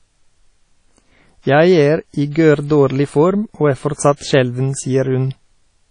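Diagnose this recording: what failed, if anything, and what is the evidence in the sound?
The whole recording sounds washy and ringing, with a hiss that swells and fades along with the speech and nothing at all above about 10.1 kHz. The damage is plainly audible and sits at the codec stage. It is likely WMA compression at a low bitrate, which fits something near 32 kbps, where weak spectral lines are zeroed and long transform blocks smear quantisation noise over tens of milliseconds.

Just after "form og er", from 4.16 to 4.21 s, a brief hiss of about 46 ms arrives ahead of a sharp onset, and that attack sounds softened. This is pre-echo, also from the codec: noise sized for the loud attack spreads back across the quiet start of its transform block.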